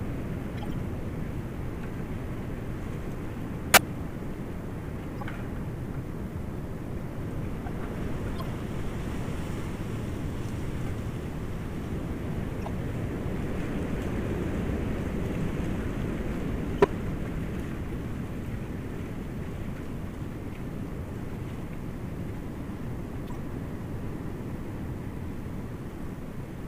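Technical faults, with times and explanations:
0.57–0.65 s, 3.74–3.81 s, 5.16–5.23 s, 8.39–8.47 s, 12.59–12.68 s, 16.78–16.86 s, 17.92–17.94 s and 23.27–23.36 s: corrupt frame decoded. Each is a short chirp or noise burst, mostly 70 to 90 ms, the one at 17.92 s briefer. Damaged compressed data was played anyway, so energy lands at wrong frequencies across a few frames. The bursts at 3.74 s and 16.78 s are loudest, near -10 dBFS.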